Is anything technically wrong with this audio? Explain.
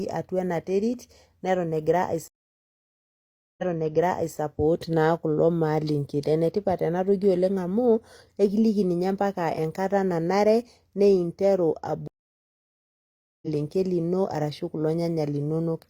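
Yes, there are two stream reconnects in this speech. From 2.28 to 4.38 s, about 1.3 s of silence gives way to speech replayed from 0.79 s earlier. From 12.08 to 13.47 s, after "enkata nanare ninteru", a similar silence ends roughly a second further on, at "lino ashu kulo". Each time the connection broke, and a fresh decoder started mid-stream, its first frame fading in. Unlike a simple dropout, the audio never picks up where it stopped.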